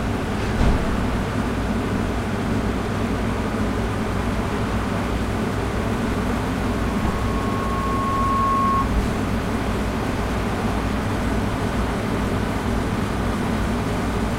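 At 6.50 s a microphone begins picking up the loudspeaker it feeds, and at 1.1 kHz the loop's gain climbs past one, so that frequency reinforces itself on each trip around. What is heard is a single tone that swells steadily over about two seconds into a piercing loudspeaker feedback squeal, ending up roughly 5 dB louder than the surrounding sound before it stops at 8.94 s.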